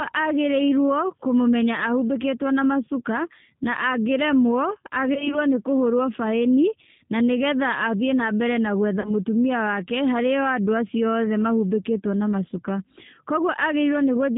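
G.729 codec damage runs through the whole recording. The speech is cut off above 4 kHz and sounds slightly rough and synthetic, which fits an 8 kbit/s G.729A stream that rebuilds each 10 ms frame from a vocal tract filter, a pitch predictor and a few pulses.

VoIP packet loss concealed by the speech codec occurs at 5.14 to 5.38 s and again at 9.00 to 9.11 s. Roughly 20 ms, then 40 ms, went missing. The decoder stretched its last pitch and filter into a fading buzzy tone or coloured noise, and the speech stays weak or distorted after each gap.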